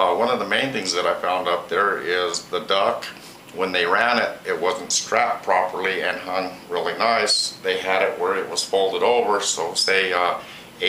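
No technical faults can be heard anywhere in this recording, and the signal holds steady and intact throughout.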